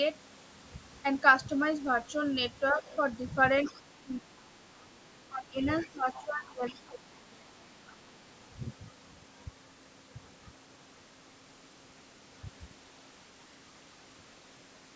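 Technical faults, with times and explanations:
2.72–2.82 s, 3.70–7.65 s, 8.17–8.32 s: speech suppressed in double talk. The voice dips about 5 dB, then up to about 20 dB, likely from the echo canceller attenuating both talkers.
2.86–2.96 s, 3.65–3.80 s, 5.80–6.24 s, 6.67–6.79 s, 7.87–7.97 s: other side's voice leaking through. Brief second voice, about 20 to 30 dB below the talker, likely residual loudspeaker echo left uncancelled.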